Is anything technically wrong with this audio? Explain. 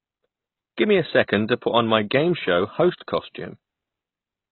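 Yes, there are two faults. The whole speech clip sounds dull and smeared, with a watery, warbling texture on sustained sounds and fizzy sibilants. Nothing is audible above about 4.2 kHz. This is likely heavy AAC compression, consistent with AAC-LC at a very low bitrate of around 16 kbps. With so few bits, the encoder drops the top of the spectrum entirely. It also starves the remaining bands, so coarse quantisation leaves gaps and swirling noise where detail should be.

From 2.97 to 3.01 s, just after "on my game show", a brief smear of hiss runs about 33 ms ahead of a sharp onset, and the attack itself sounds blunted. This is pre-echo. The transform block containing the attack was quantised as a single unit, so noise sized for the loud onset was spread across the whole block, including the quiet moment before it.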